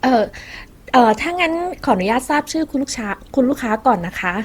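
Likely generation loss from repeated Opus re-encoding, around seven passes at something like 64 kbit/s, leaves the speech swirly, smeared and hollow throughout, with blurred attacks.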